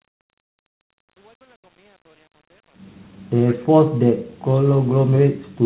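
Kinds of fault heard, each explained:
Speech suppressed in double talk: Between 3.59 and 4.51 s the speech dips sharply, falling by roughly 40 dB at its deepest, with about 0.7 s lost in total, while the narrowband, 4 kHz-limited call sound carries on around it. The likely cause is an echo canceller that heard both sides talking at once, could not tell this talker from loudspeaker echo, and turned the near-end speech down along with it.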